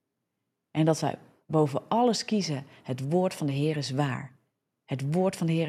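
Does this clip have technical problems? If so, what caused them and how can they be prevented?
No, the signal shows no technical problems, so there is no cause to trace and nothing to prevent.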